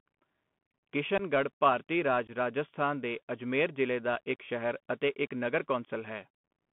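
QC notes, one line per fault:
Throughout: Bluetooth CVSD headset codec. The speech is squeezed into a narrow telephone band of roughly 150 Hz to 3.4 kHz at 64 kbps, one bit per sample. The adaptive step lags on fast high sounds, so sibilants turn scratchy and a granular hiss sits underneath.
1.18 to 1.22 s and 2.27 to 2.30 s: unconcealed Bluetooth headset packet loss. Each gap drops about 15 ms, likely two or so lost packets filled with silence. The holes have hard, abrupt edges, just before "ਭਾਰਤੀ ਰਾਜ ਰਾਜਸਥਾਨ ਦੇ" and between "ਭਾਰਤੀ ਰਾਜ" and "ਰਾਜਸਥਾਨ ਦੇ ਅਜਮੇਰ ਜ਼ਿਲ੍ਹੇ".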